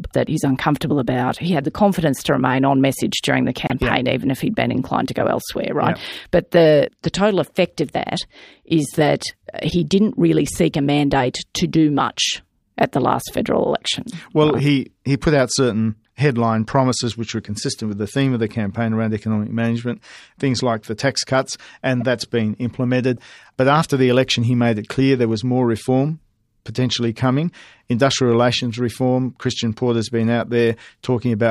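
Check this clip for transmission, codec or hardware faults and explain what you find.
Corrupt frames were decoded at four points, at 3.67–3.72 s, 9.70–9.72 s (after "of that is that"), 22.00–22.03 s (after "like the tax cuts") and 23.17 s (after "that's been implemented"). Damaged bits misplace energy across the spectrum, so each sounds like a brief chirp, squeak, blip or burst of noise. The first is loudest, and the last is faint.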